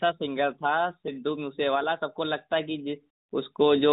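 Speech, with nothing technically wrong to report. It carries the narrowband sound of the AMR-NB mobile codec at 12.2 kbps: nothing above 4 kHz and only light coding colour on the voice.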